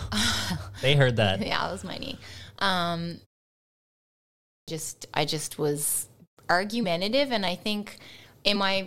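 At 4.39 s, after a 1.21 s pause, the speech bursts in abruptly with about 0.29 s missing: a clipped start after a pause, as the output device wakes too slowly.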